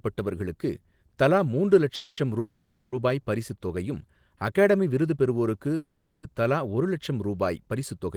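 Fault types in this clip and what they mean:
call audio freeze: Three times, after "தலா மூன்று" at 1.95 s, then at 2.39 s and 5.76 s, the last sound smears into a fading buzz for 0.22, 0.53 and 0.47 s. Speech then resumes right where it stopped, just later, likely because delayed packets drained the jitter buffer.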